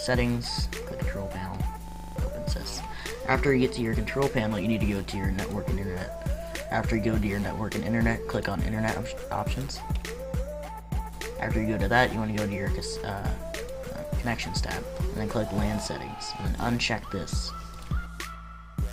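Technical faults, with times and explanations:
1.88 to 2.16 s, system hang loop: the machine or its audio driver stalled here, but the sound hardware kept replaying whatever sat in its ring buffer, so one 40 ms slice repeats exactly, seven times over. Cycling at 25 Hz, it comes across as a rough, rattling buzz rather than a clean stutter. When playback picks back up, about 0.3 s of the real audio is simply gone.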